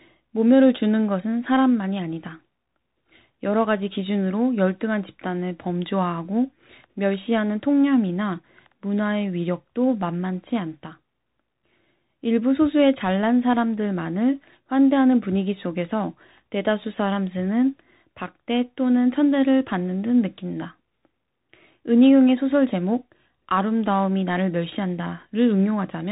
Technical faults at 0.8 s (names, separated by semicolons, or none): Bluetooth CVSD headset codec